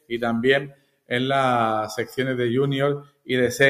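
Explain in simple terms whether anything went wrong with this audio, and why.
Something did go wrong. A noise suppressor designed for speech was left running on material that isn't speech, so the whole clip has a noise suppressor applied to music or sounds. The processor treats steady tones, room ambience and reverberation as unwanted noise and pushes them down, while sharp onsets slip through. The result is a level that keeps jumping by a large amount, so the audio pumps and sounds thinner than it should.

In three places the sound is cut by the noise suppressor, dropping far below its surroundings: from the start to 0.16 s, from 0.6 to 1.11 s, and from 3.01 to 3.29 s. In each stretch the suppressor decided the sound was noise and clamped it hard. Sustained or fading parts sink in level and their tails end early, while anything abrupt still pokes through, leaving audible dips.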